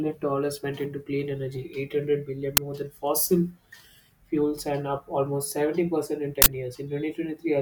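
At 2.57 s and again from 6.42 to 6.46 s, an uninitialised buffer plays leftover memory as audio: a loud crack at the first and a harsh, loud burst of digital noise at the second, rather than a dropout's silence.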